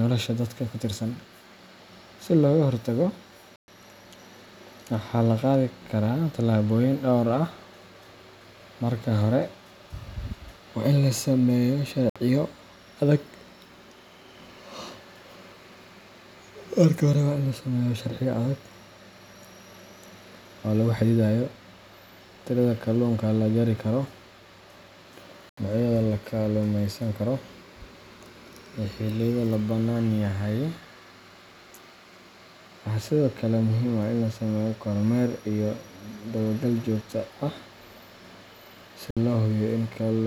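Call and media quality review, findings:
Silent gaps, sound resuming further on as if it had kept playing: 3.56–3.68 s (120 ms), 12.10–12.16 s after "waa in la sameeyo" (60 ms), 25.49–25.58 s (80 ms), 39.11–39.17 s (60 ms). Likely Bluetooth dropout: late packets discarded, headphones output silence.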